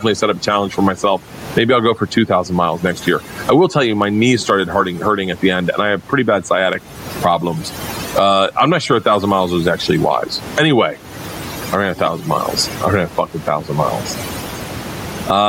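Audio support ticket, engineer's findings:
Overdone noise removal, throughout: background dropped, breaking up into twinkling specks. Spectrogram shows isolated bins flickering on and off and quiet speech detail erased. Denoiser threshold set too aggressive.

Gain pumping, throughout: loud and soft parts pushed closer in level, swing of around 20 dB; waveform flattened. Likely excessive input gain driving a fast limiter. Room noise sits about 32 dB below speech.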